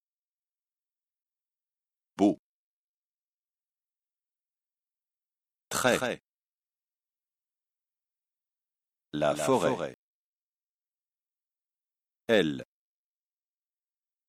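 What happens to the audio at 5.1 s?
Nothing goes wrong at 5.1 s; the audio is intact through that moment, with no dropout, click or distortion.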